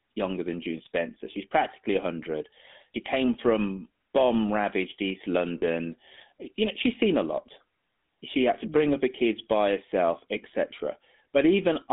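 The whole clip runs through the GSM full-rate codec. Speech is squeezed into roughly 200 Hz to 3.6 kHz, with a plainly audible buzzy, gravelly roughness that fits a 13 kbps phone link. From 5.36 to 5.40 s there's hard clipping, with peaks pushed about 3 dB past what a stage could pass and sliced flat, giving crackle on the loud bits. Then from 5.58 to 5.63 s come lost GSM frames. About 40 ms, which fits two dropped 20 ms frames, is patched by repeating the last good frame, so you hear a short rough, metallic ring.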